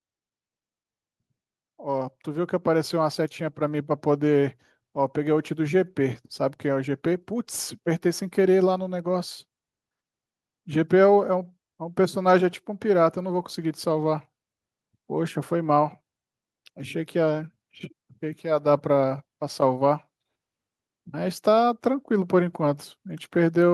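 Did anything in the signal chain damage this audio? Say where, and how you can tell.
Yes, at the call-processing stage: automatic gain rising from 1.79 s to 9.04 s, a slow climb of about 6 dB. The gain control judged the input too quiet and raised it gradually. Speech and background noise swell together, which rules out a talker simply moving closer.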